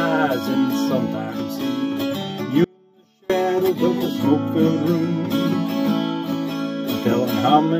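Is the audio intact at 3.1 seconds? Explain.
No. At 3.1 s the audio is inside an audio dropout to a faint residue from 2.64 to 3.30 s. The sound cuts abruptly to a trace about 35 dB down, likely signal loss on a still-live path. The waveform collapses to a sharp-edged sliver, and the spectrogram shows a near-empty band.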